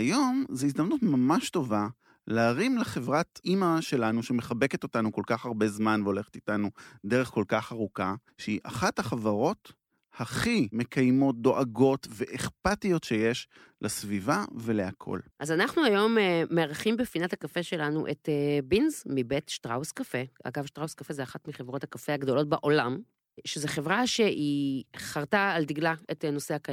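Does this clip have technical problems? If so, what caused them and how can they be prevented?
No, there are no technical problems to report here.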